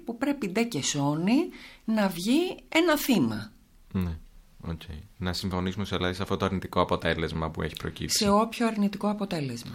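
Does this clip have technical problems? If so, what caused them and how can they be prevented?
No, nothing technical stands out in this speech recording, so there's nothing here that needs fixing or guarding against.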